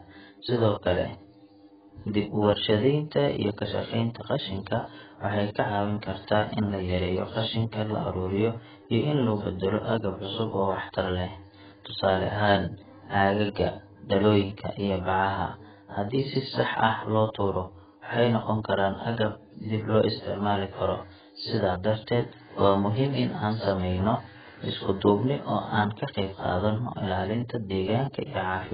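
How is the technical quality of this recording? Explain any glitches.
Quality is poor throughout, because heavy AAC compression degrades the whole recording. The speech was likely encoded with AAC-LC at a very low bitrate, and the damage fits something near 11 kbps. With so few bits per frame, the encoder discards everything above 4.9 kHz. As a result the speech sounds dull and muffled, with a smeared, warbling texture on sustained sounds and a fizzy edge on sibilants.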